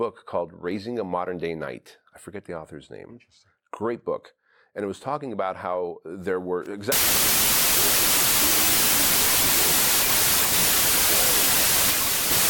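Right after "about how there were", at 6.92 s, the audio hits a wrong sample width fault and stays broken to the end. Packed 24-bit samples are being read as 16-bit, so byte pairs straddle sample boundaries. You get loud hiss with the speech buried underneath, running at two-thirds speed and lower pitch.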